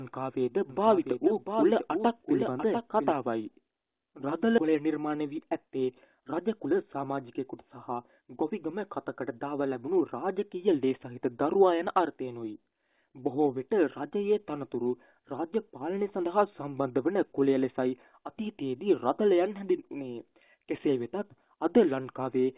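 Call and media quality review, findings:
Doubled audio track, 0.70–3.12 s: full-band copy trailing by about 700 ms, about 5 dB below the original, with an abrupt start and end. No decay or room colour, so not echo or reverb. Likely a second capture via a slower path.

Skip ahead, 4.58 s: roughly 700 ms of audio missing, the two sides joined almost directly with no gap or fill. Jitter buffer discarded queued audio, shortening delay by roughly 700 ms. A dropout would leave silence or concealment instead.

Jitter buffer speed-up, 4.68–8.83 s: playback about 8% fast, pitch unchanged, hurried feel. Receiver cut out short pitch-period pieces repeatedly, about 300 ms in total, to drain excess buffered delay. A sample-rate mismatch would raise pitch too. Band ends at 4 kHz, matching the G.711 path.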